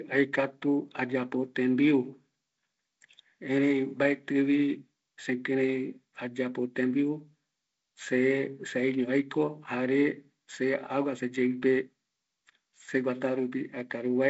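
Nothing here counts as a fault: the speech comes through a G.722 wideband telephone path as expected, with the top end stopping at about 7.7 kHz and the light coding texture that fits its lower 48 kbit/s mode.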